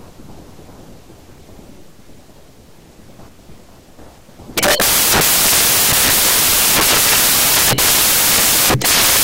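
From start to finish the speech is buried under samples built from the wrong bytes: each sample's bytes are assembled misaligned or in swapped order, so the rapidly changing low bits dominate. It sounds like loud, harsh noise, close to white on loud sounds. A spectrogram shows flat broadband energy.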